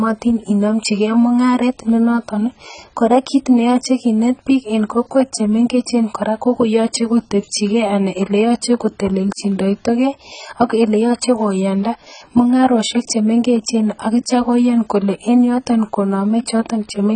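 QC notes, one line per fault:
Throughout, AAC compression: dull, smeared speech with warbling sibilants; likely heavy low-bitrate coding near 16 kbps, spectrogram shows nothing above 9.1 kHz.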